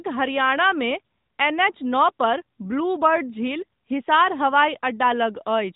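AMR narrowband mobile codec throughout the speech: nothing above 3.8 kHz passes, and pulse-excited vocal-tract modelling leaves a plainly buzzy, synthetic edge, fitting a rate near 10 kbps.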